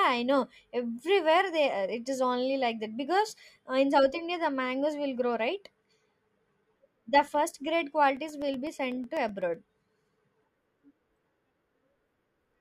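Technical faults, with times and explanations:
8.17 to 12.54 s, periodic USB or driver dropouts: the speech picks up a steady ticking, one small click every 0.125 s, about eight a second and around forty in all, heard only where there is voice. At each tick roughly a millisecond of audio is lost and replaced by silence, because something on the USB bus or in the audio driver stalls the stream at a fixed interval. The sudden gap in the waveform is what makes each click.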